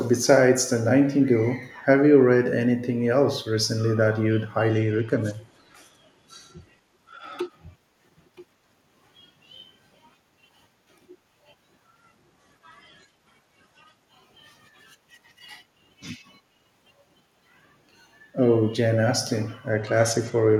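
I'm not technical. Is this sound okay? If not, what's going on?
No. The speech has three stretches of Bluetooth SBC bit pool drop, at 4.70–7.51 s, 12.00–14.05 s and 19.70 s to the end. The link likely got crowded, so less data got through: treble goes dull and gritty, yet never cuts out like a dropout.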